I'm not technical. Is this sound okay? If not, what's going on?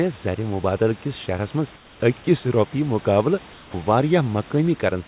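No. In two short pauses, at 1.76 to 2.0 s (just before "أکس روپیہ") and 3.53 to 3.74 s, the real room background is replaced by comfort noise: a smooth, even hiss, slightly quieter, especially the first time. It is likely inserted by the call system while no one is talking. Unlike a dropout, the sound never goes fully silent.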